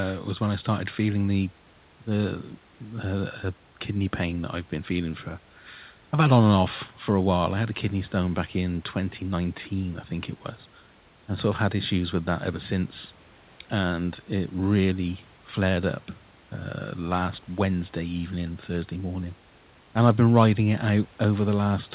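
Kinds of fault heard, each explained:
No fault can be heard in the recording. The speech reaches the listener as narrowband telephone audio with nothing above 4 kHz, which fits a G.711 mu-law call path at 64 kbps, and the room noise sits about 32 dB below the speech.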